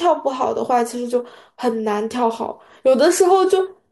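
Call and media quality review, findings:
No audible faults found in this speech clip.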